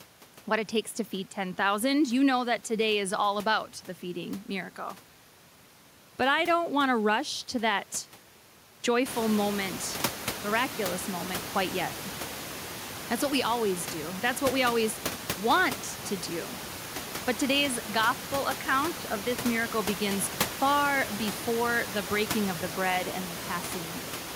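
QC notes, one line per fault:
18.01–19.72 s, input switched to a poorer device: the speech abruptly turns dull and boxy, and a faint new noise sits far beneath it. There is no gap at the switch and the level stays about the same. The full band returns at "begins far before the". The likely cause is the system briefly moving to a narrower-band microphone or headset profile that brings its own tone and noise, heard over a room noise that has risen since about 9 s.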